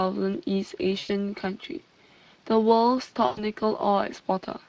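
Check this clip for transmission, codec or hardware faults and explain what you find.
Two faults are present: Speex codec damage throughout and two packet-loss gaps filled in by the decoder.

Speex codec damage is plainly audible across the whole clip. Speex is a CELP speech codec. It models the voice as a filter driven by an excitation signal. Too few bits reach that excitation, so the speech comes out noisy and hoarse. The coding artefacts point to a bitrate around 20 kbps.

VoIP packet loss concealed by the speech codec occurs twice. The first is from 0.99 to 1.11 s, about 100 ms of lost audio. That fits five lost 20 ms frames. The second is from 3.25 to 3.45 s, about 120 ms, which fits six lost frames. The decoder had no data and extended the last pitch and filter. It lowered the gain frame by frame. The speech smears into a buzzy tone or coloured noise that fades. It stays weak or distorted briefly after packets return, because each frame builds on the previous one.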